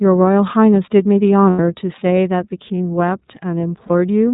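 Throughout, the speech has iLBC codec coloring: nothing above 4 kHz, and a plainly audible rough, synthetic edge that fits the 13.33 kbps mode with 30 ms frames. This differs from ordinary band-limiting, which removes the top but does not add that grain. At 1.5–1.59 s, and again at 3.87–3.91 s, lost iLBC frames are concealed as a held, slightly buzzy vowel. The first gap lasts about 90 ms, which fits three missing frames, and the second fits one. The voice recovers at once after each gap, unlike codecs whose errors linger across the following frames.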